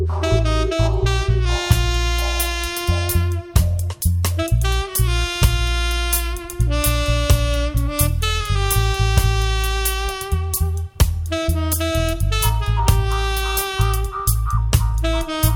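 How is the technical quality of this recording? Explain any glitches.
No technical faults are audible.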